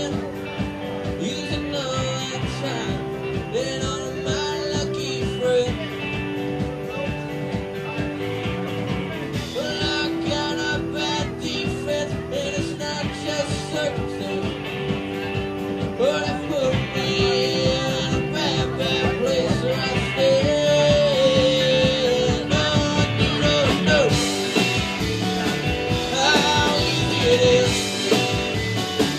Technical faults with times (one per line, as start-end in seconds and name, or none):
0.00-29.19 timecode bleed